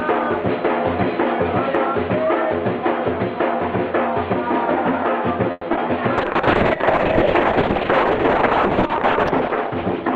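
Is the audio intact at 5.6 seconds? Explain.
No. From 5.51 to 5.65 s there is a call audio freeze: the last sound is stretched into a fading buzz for about 120 ms, then briefly drops out before resuming where it stopped. The likely cause is delayed packets emptying the jitter buffer.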